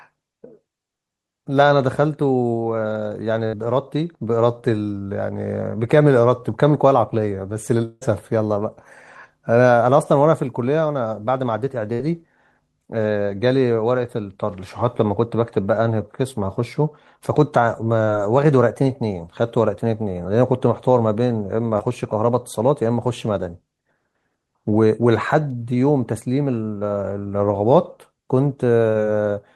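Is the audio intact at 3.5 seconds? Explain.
No. From 3.47 to 3.55 s the speech is hit by a burst of packet loss. Consecutive packets never arrived in time, so the receiver stretched the last sound it had for about 54 ms, fading it down, and then picked up the stream again about 60 ms further along, skipping that stretch of speech entirely. A plain dropout would give silence. Here the concealed gap is filled with a smeared, dying continuation of the preceding sound, followed by a jump forward.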